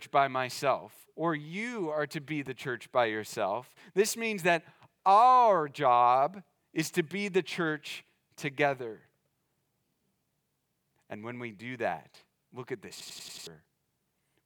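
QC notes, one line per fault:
13.00–13.47 s, system hang loop: right after "that look at this", one piece of about 93 ms repeats exactly five times, giving a machine-gun stutter at 10.8 Hz that fits a 4096-sample ring buffer being replayed while the system froze, with roughly half a second of audio lost. Unlike a dropout or codec concealment, nothing goes silent or smeared; each repeat is an exact copy, so the stutter is perfectly regular.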